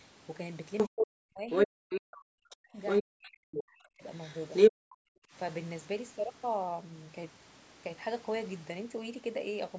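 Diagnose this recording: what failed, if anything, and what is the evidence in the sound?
Other side's voice leaking through at call processing: 0.78–1.05, 1.5–2.0, 2.87–3.03 and 4.15–4.71 s, around 10 to 15 dB relative to the speech. This is likely loudspeaker echo the canceller left behind.

Speech suppressed in double talk from 0.88 to 4.04 s and 4.7 to 5.34 s, dipping by around 40 dB. The echo canceller likely attenuated everything while both sides overlapped.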